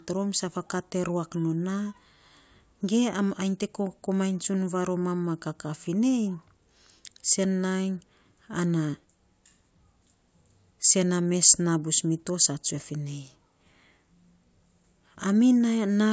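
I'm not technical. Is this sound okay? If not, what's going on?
Yes, I can't hear any problems with this recording.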